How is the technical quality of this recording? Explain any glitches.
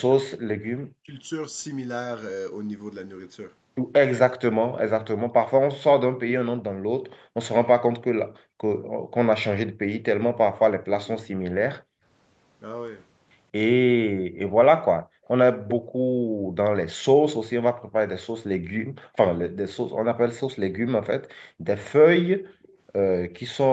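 The recording has three kinds of echo-canceller fault: speech suppressed in double talk, background gated by the echo canceller, and echo leak. They sit over a call path whose sound is capped at 8 kHz, which fits Opus at a modest bitrate.

From 0.05 to 1.11 s the speech sinks by roughly 40 dB for about a second. The likely cause is speech suppressed in double talk: both ends talked at once, and the canceller could not separate the local talker from the loudspeaker echo, so it turned everything down. Background gating affects only the room sound, but this fault removes the talker too.

Background gated by the echo canceller appears twice. From 6.72 to 8.59 s the room tone drops by about 39 dB in short stretches totalling around half a second. From 11.81 s to the end it drops by about 40 dB. Each time, the far-end loudspeaker was playing and the canceller clamped the microphone. The background noise floor falls away and then returns.

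Three echo leaks follow, each heard as a delayed copy of the voice. The likely cause is a speakerphone canceller that did not remove everything its microphone picked up. At 11.05 to 11.28 s the copy trails by 192 ms at roughly 30 dB below the speech. At 15.24 to 15.72 s it trails by 204 ms at about 15 dB down. At 22.62 to 23.55 s it trails by 227 ms, around 35 dB down. The lag of about 200 ms and the repeated voice distinguish these from room reverberation.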